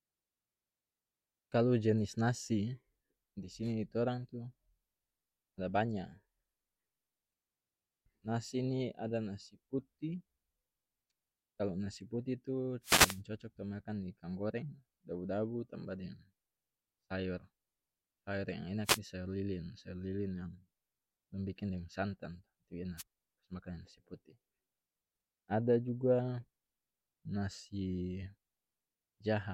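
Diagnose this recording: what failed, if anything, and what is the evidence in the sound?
The analogue FM wireless link between the microphone transmitter and its receiver dropped out three times, and each dropout is heard as a wireless microphone noise hit. Just after "kalu nasi putih tu", a burst of static runs from 12.83 to 13.21 s. Shorter swishes follow at 18.84 to 18.99 s and at 22.97 to 23.03 s. Each time, reflected radio paths cancel the carrier and the receiver's noise floor rises into the gap.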